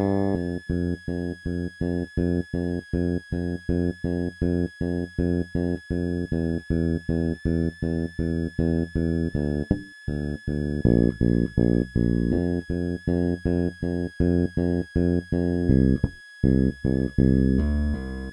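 A switching power supply in the chain is running in an audible burst mode or beating with another supply, producing a switching supply whistle throughout the recording: a thin high tone wandering between 1.66 and 1.74 kHz, sitting roughly 25 dB below the main sound.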